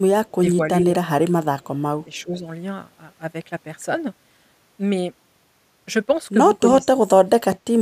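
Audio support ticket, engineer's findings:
Echo leak at 0.26–0.32 s and 2.17–2.21 s: faint copy of the speech trailing by 423 ms, very low, around 40 dB under. Likely far-end echo canceller letting some loudspeaker pickup through, which gets sent back.

Speech suppressed in double talk at 0.40–0.85, 1.24–1.33, 2.24–2.45, 6.82–7.01 and 7.24–7.79 s: talker dips in chunks. Slight near 2.3 s, moderate early on, deep toward the end. Likely echo canceller mistaking overlapping talk for echo and ducking both.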